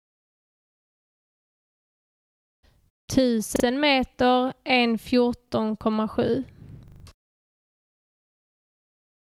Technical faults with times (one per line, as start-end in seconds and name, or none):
3.56-3.64 repeated buffer
5.48-5.52 repeated buffer
6.88-7.04 repeated buffer